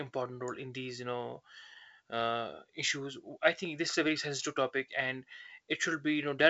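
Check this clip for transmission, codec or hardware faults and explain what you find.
The signal shows no faults, carrying speech through G.722 wideband telephone coding with content reaching up to 7.7 kHz and nothing above, and the light upper-band coding traces point to the codec's full 64 kbit/s mode.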